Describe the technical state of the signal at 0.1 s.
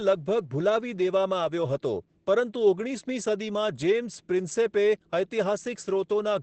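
At 0.1 s, as throughout, Opus voice compression in SILK mode cuts everything above 8.8 kHz and coarsely codes the excitation, giving muffled, hoarse speech consistent with about 12 kbps.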